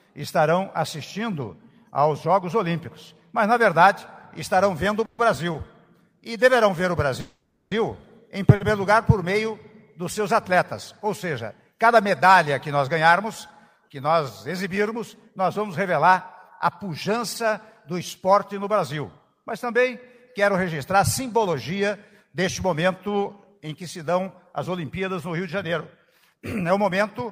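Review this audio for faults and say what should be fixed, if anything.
Call audio freeze at 5.05 to 5.20 s and 7.20 to 7.73 s. The last sound is carried on as a fading buzz, for 130 ms and then 510 ms. The second decays into 240 ms of silence. Nothing is lost. The audio resumes where it stopped, so the delay grows by the same amounts. The likely cause is packets held up in transit until the jitter buffer emptied.

Short stall from a late packet at 5.52 to 5.56 s and 8.55 to 8.62 s. A packet missed its playout time. The receiver stretched the preceding sound by 20 ms and then 50 ms, which gives a brief held sound with a slight buzz or dip. Playback then continues without any loss.

Jitter buffer speed-up from 19.03 to 27.22 s. The buffer held more audio than it aims for, as happens when delayed packets arrive together. The receiver cut many short pitch-period pieces to shed about 0.4 s of delay. 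Playback runs at 105% with unchanged pitch, so it sounds hurried.

To prevent these faults, fix the network path's delay spikes and bursting, and let the jitter buffer adapt its target depth more gradually.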